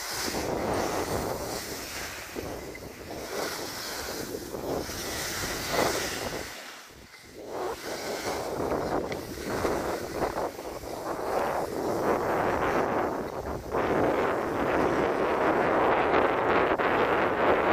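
At 11.39 s there is a brief click with a buzzy edge, too short to hear as a stutter. It is a repeated buffer: new audio did not arrive in time, so the device replayed the last block several times over, with a hard join at each repeat. Each block lasts about 1.45 ms, which fits a 64-sample buffer, and cycling it that fast gives the buzz. Only a few milliseconds of audio go missing.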